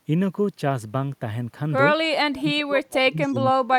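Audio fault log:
2.35–2.39 s, echo leak: a faint copy of the speech about 291 ms late and about 25 dB down, likely from an incompletely cancelled loudspeaker, appearing as a weak repeated spectral pattern.
2.40–3.78 s, speech suppressed in double talk: the speech dips by as much as 30 dB, likely from the echo canceller attenuating both talkers, showing as a shrunken waveform.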